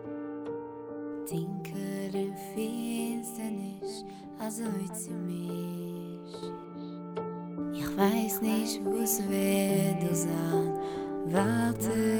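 At 6.43 s the level steps up by about 7 dB and stays there to the end: a sudden gain jump. Sound and background noise rise together in a single instant, which likely comes from a gain setting or bit shift applied from one sample to the next without a ramp. Unlike an automatic gain control or a fader move, there is no gradual swell and no pumping afterward, just one hard step that then holds steady.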